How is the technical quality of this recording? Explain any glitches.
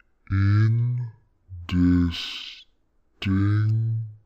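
The technical quality is poor. A stereo-read-as-mono fault runs throughout. Left and right samples are read in sequence as one channel. The audio therefore plays at half speed, an octave low.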